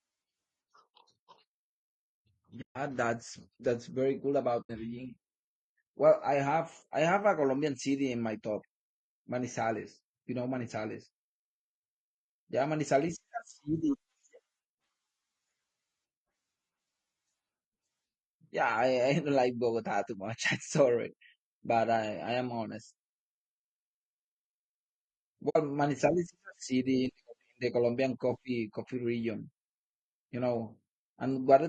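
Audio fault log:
throughout: low-delay AAC compression. The speech was likely carried through AAC-ELD at a low bitrate, around 32 kbps by the sound of it. Its short frames resolve pitch harmonics poorly, so the voice turns plainly rough and grainy, with noise between harmonics and a thin, synthetic top band.
2.61 to 2.76 s, 4.61 to 4.70 s, 25.49 to 25.56 s: AAC frame loss with muting. Runs of frames went missing and the decoder zeroed them, leaving soft-edged holes of 140, 80 and 60 ms, which fits frames of about 20 ms. Overlapping windows fade the sound out and back in. The first hole falls just before "that's that's very cool" and the second just after it.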